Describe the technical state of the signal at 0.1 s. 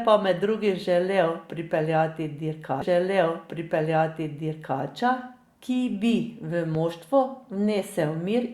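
At 0.1 s the speech signal is intact, with no audible fault at that moment.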